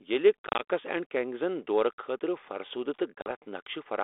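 Speech over a narrowband ADPCM link, with packet loss on an ADPCM call at 0.47–0.62 s and 3.17–3.32 s. Several short gaps cut hard to silence (70 ms and 50 ms lost in total). Each time the decoder's predictor and step size lose track, so the audio resumes with brief, slight distortion.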